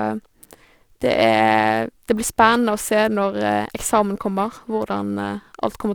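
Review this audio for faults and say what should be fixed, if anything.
Periodic clock jitter runs through the whole clip, from start to finish. Interference is modulating the converter's sample clock at a steady rate of around 1 kHz, so each component of the speech picks up sidebands spaced roughly 1 kHz above and below it. The upper frequencies are hit hardest, which gives the voice a rough, metallic edge that disappears in the pauses. To prevent it, clock the converter from a clean, well-isolated source and keep interference away from the clock line.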